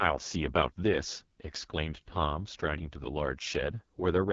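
From start to finish the speech carries the sound of the AMR wideband (HD Voice) codec. Nothing is heard above about 7.3 kHz. The damage is heavy. The voice sounds rough and raspy, with a buzzy, grainy edge. That points to the codec running at its lowest rate, around 6.6 kbit/s. At that rate the pulse-driven vocal tract model has too few bits to follow the voice cleanly. The top band is only shaped noise, so it adds hiss instead of detail.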